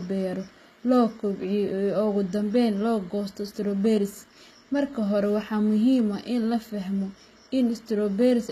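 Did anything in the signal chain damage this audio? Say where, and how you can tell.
Yes. At the codec stage, the speech shows plainly audible damage from start to finish, most likely HE-AAC compression. The s sounds come out gritty and metallic, with treble that stays bright but doesn't track the voice. On a spectrogram, the upper band looks like a smeared, copied-up version of the lower harmonics with a blocky envelope, and nothing appears above 14.9 kHz. Spectral band replication explains it, and the coarseness points to a low bitrate of around 20 kbps.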